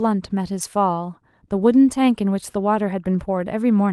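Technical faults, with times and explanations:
No technical fault can be heard in the signal, and the speech carries only the light coding texture of Opus voice compression running in hybrid fullband mode at 24 kbps.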